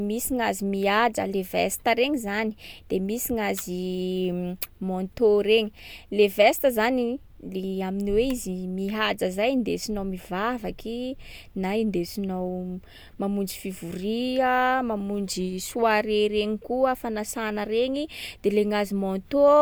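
Nothing in this speech recording stands out as a technical fault; there's no glitch, dropout or other problem to point to anywhere in it.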